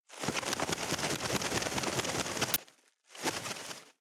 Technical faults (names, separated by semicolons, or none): gain pumping; uninitialised buffer